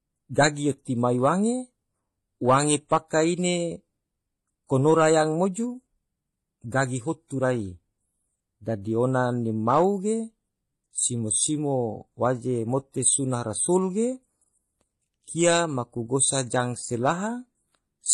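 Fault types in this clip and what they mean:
Transcoding between lossy codecs: the speech carries two layers of compression damage at once, with smeared, swirly artefacts like an MP3's under the hollow, synthetic top end of a low-rate HE-AAC encode. Nothing survives above 12.7 kHz. Likely an MP3 re-encoded to HE-AAC.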